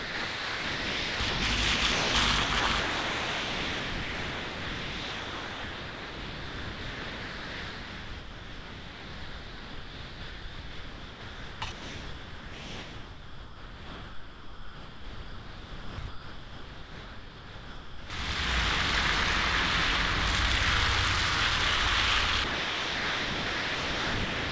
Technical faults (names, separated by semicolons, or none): sound chopped by the voice detector; sound dropped by the voice detector